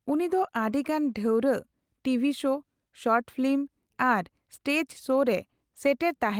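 Nothing technical gets in the way here: the speech comes through without a single fault worth pointing to.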